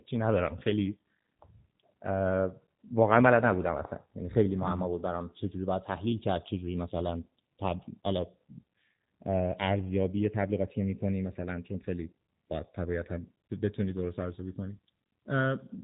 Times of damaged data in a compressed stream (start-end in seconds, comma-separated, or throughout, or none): none